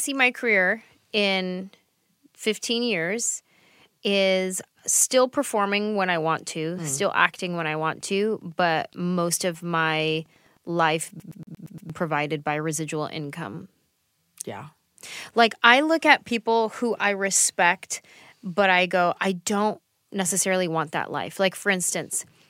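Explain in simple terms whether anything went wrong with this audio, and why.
Two things went wrong in this speech recording.

The first is Wi-Fi interference. Right after "still performing when I", from about 6.36 to 10.96 s, a faint, steady ticking sits under the sound. It comes about ten times a second. A nearby Wi-Fi radio sends a short signal every 102.4 ms. The audio circuit picks it up and turns it into these clicks. Each tick is one of those radio bursts leaking in.

The second is a CD stuck on one turn. From 11.20 to 11.90 s, the sound stutters fast and evenly. The same tiny slice of audio, about 0.12 s long, plays six times in a row, with a brief gap at each jump. A scratch keeps throwing the laser back to the same spot on the disc. Playback then recovers, just before "provided by residual income".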